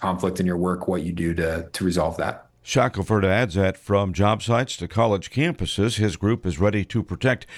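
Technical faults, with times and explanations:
No technical faults, with times and explanations, can be given, as none are heard in this audio.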